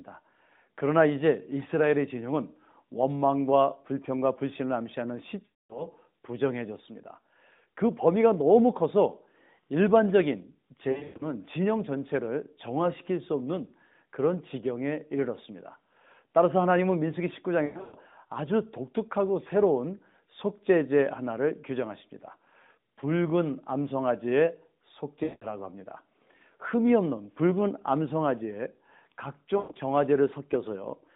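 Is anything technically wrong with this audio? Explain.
Yes. The speech has lost AMR speech frames at five points: 5.46–5.88 s, 10.92–11.28 s, 17.66–17.96 s, 25.24–25.52 s and 29.58–29.77 s. At each one, corrupted frames were rejected, and the narrowband decoder kept repeating its last good pitch and spectral shape while lowering the gain. The sound smears into a drawn-out tone that fades within about 0.1 to 0.2 s and then returns weak for a moment. The gaps are 240, 220, 240, 180 and 140 ms. At 10.92, 17.66 and 29.58 s the losses are scattered over about 160 to 280 ms, with runs of up to 120 ms, so those spots mix brief dips or warbles with fading. A plain dropout cuts straight to silence, and this fault differs from it by stretching the last sound out before it fades. Throughout, the band stays within the narrowband telephone range of roughly 150 Hz to 3.7 kHz.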